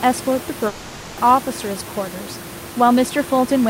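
From 0.67 to 1.19 s the speech turns into a fading buzz, likely a long network dropout: about half a second of audio never arrived, so the receiver stretched the last sound across the gap. On a spectrogram, the harmonics freeze into flat, decaying bands until speech resumes, with the room noise about 13 dB below it.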